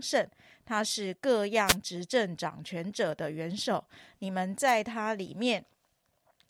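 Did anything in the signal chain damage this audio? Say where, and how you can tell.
Yes, wireless microphone noise hits in the analogue FM radio link: static swishes at 1.65–1.76 s and 4.67–4.72 s, where multipath fades let receiver noise rise.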